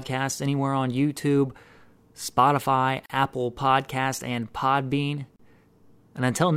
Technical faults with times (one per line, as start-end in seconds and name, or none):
3.06-3.10 gap at a join of encoded pieces
5.36-5.39 gap at a join of encoded pieces